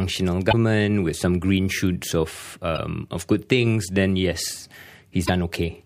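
A speech clip with damaged data in a compressed stream, heard three times. Brief chirps or blips occur at 0.49–0.54 s, 2.73–2.79 s and 5.24–5.30 s. Corrupted bytes make the decoder misread frames, lose sync and hunt for the next valid header.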